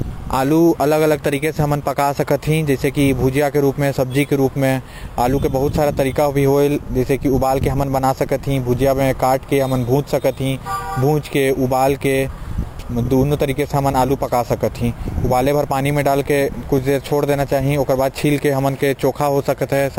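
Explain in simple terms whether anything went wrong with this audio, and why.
Something did go wrong: the whole recording carries imaging from sample-and-hold upsampling. Each sample was simply repeated to raise the rate, with no smoothing filter, which fits an original rate near 12 kHz. That leaves mirrored copies of the speech between 6 and 12 kHz, heard as a bright metallic fizz. Unlike steady hiss, it rises and falls with the speech and goes silent in pauses, and its lowest part moves opposite to the voice's pitch.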